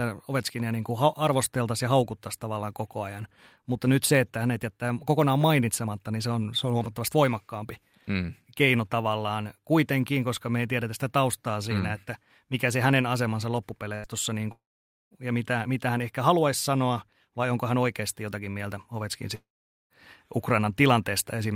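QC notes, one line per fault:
13.95–14.07 s, burst of packet loss: right after "mikä se hänen asemansa" about 80 ms of speech goes missing. The receiver stretches the last sound out and fades it for roughly that long, and then the speech picks up a bit further along, with that slice gone.
14.52–15.14 s and 19.35–19.93 s, long network dropout, likely the cause: about 0.6 s and 0.56 s of speech drop out. Each starts with the last sound briefly continued and fading, then goes to silence for about half a second. The first comes back at "ja mitä mitä hän", and the speech in between is lost in both.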